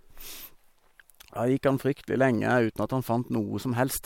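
No technical faults can be heard anywhere in the speech. Nothing in the recording calls for a timestamp or a note on what went wrong.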